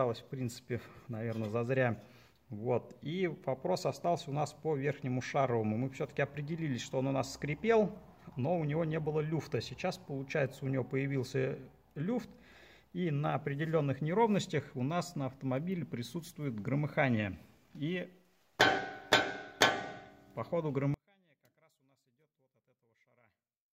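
From 20.94 s to the end, the sound drops about 38 dB to a faint trace. One channel inverted likely cancels shared content in mono.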